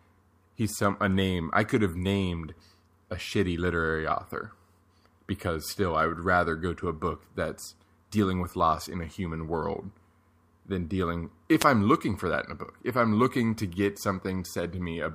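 A wireless microphone noise hit occurs at 11.58 s and lasts to 11.66 s, just under a tenth of a second. The radio link carrying the speech weakened for that moment, as reflected copies of the transmitter's signal arrived out of step and cancelled one another at the receiver. With less signal to lock onto, the receiver's own noise rose, producing a brief swish of static.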